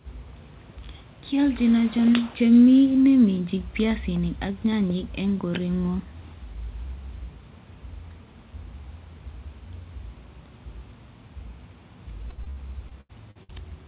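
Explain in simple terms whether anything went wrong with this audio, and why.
Near the end, from about 12.3 to 13.5 s, the speech turns choppy and robotic. That's repeated packet loss: bits of audio kept going missing, each gap (the longest around 81 ms) patched by stretching the previous sound, so over a quarter of that stretch is filler. The call codec's cut-off above 4 kHz gives the whole clip a phone-line sound.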